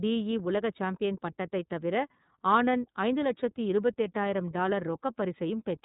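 From start to end the speech carries iLBC codec damage: nothing above 3.8 kHz, and each 30 ms frame is coded independently, leaving a plainly rough, synthetic texture. A spectrogram shows an empty band above 3.8 kHz throughout.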